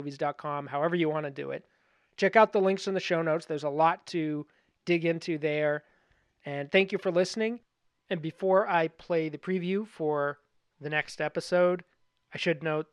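No audible faults anywhere in this speech recording; nothing to flag.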